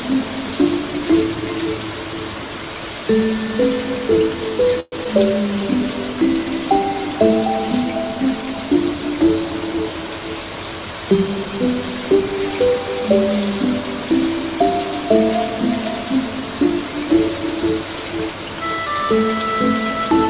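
At 4.8 s the sound stops advancing for 0.14 s, which is a call audio freeze. The likely cause is packets arriving late and the jitter buffer running dry. For about 120 ms the receiver keeps extending the last fragment as a fading buzzy tail, and it sinks into roughly 30 ms of near silence before the audio picks up exactly where it left off. Nothing is lost, and everything after it now sits 120 ms later. A dropout would cut content instead.

At 5.04 s comes a skip ahead lasting about 27 ms. Roughly 70 ms of sound is dropped, with only a 7 ms bridge between the two sides. What you hear is an abrupt, nearly seamless jump forward, a clipped fragment rather than a pause. That distinguishes it from the freeze just before. There, time stretched and nothing was lost. Here, content is gone and latency drops by about 50 ms.

From 5.47 to 5.88 s there is a jitter buffer slow-down. The receiver builds its reserve back up by repeating single pitch periods and small slices of pauses, adding 49 ms over those 0.41 s. 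Playback runs at about 89% speed with the pitch unchanged, so sounds drag. Unlike a freeze, there is no buzzy fill and no silence. The sound just turns sluggish for a moment. All of it passes through the G.711 mu-law call path, which leaves nothing above 4 kHz.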